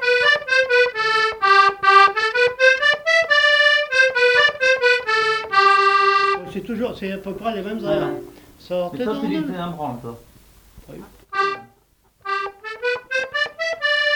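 Nothing stood out on listening; no technical problem could be heard anywhere in the audio.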